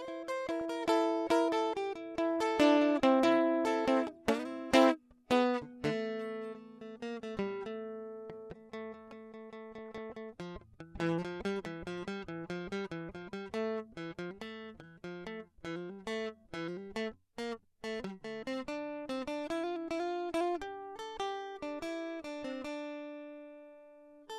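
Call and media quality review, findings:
DAB burbling at 0.60 s, 9.78–10.10 s and 13.16 s: blips over the music as weak-reception bit errors corrupt MP2 audio data, putting short noise blips in single sub-bands.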